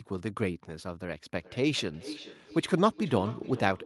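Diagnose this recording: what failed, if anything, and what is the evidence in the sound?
Feedback echo between two devices from 1.35 s to the end: call-processing stage, speech returning roughly every 0.4 s at about -15 dB, as another device replays it and this canceller misses it.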